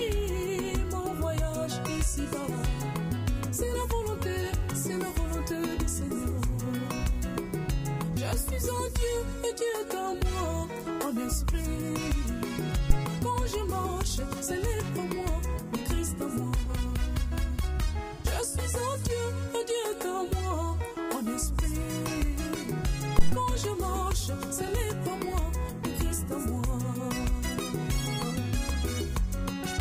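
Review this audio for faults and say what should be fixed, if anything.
Two phantom power thumps stand out, one at 12.90 to 12.99 s and another at 23.19 to 23.41 s, each peaking around -9 dBFS. They're deep bumps that die away quickly, in about 20 ms and 49 ms. That's the supply being switched on a live input, with the voltage step pushed through the coupling capacitors into the recording. To prevent it, mute the channel or pull the fader down before toggling phantom power.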